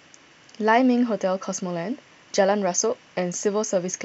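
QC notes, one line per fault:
Nothing to flag here, no faults can be heard anywhere in this speech.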